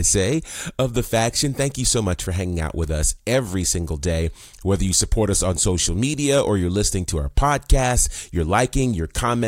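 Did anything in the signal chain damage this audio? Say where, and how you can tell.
No, nothing in the signal chain audibly damaged this speech.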